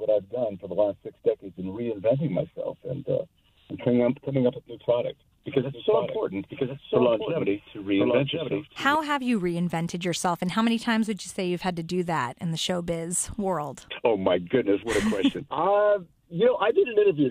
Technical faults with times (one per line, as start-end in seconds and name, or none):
5.55-8.95 doubled audio track